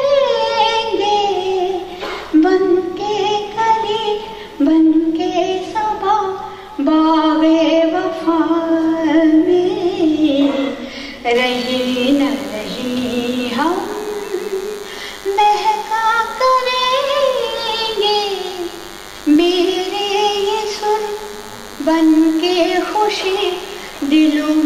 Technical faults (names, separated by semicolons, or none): DECT cordless phone buzz